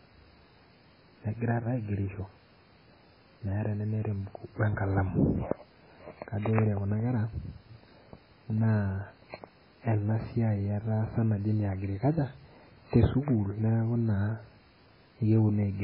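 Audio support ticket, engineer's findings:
Throughout clip: likely MP3 compression at a very low bitrate, consistent with a 16 kbps encode. Encoder short of bits: weak frequency lines dropped, toggling frame to frame; top band discarded. Result: heavy codec damage, watery, swirly texture across the speech, smeared onsets, sibilants chirpy. Bandwidth: nothing above 5.3 kHz, so the speech sounds dull and muffled. Damage present for the full length of the clip, not intermittent.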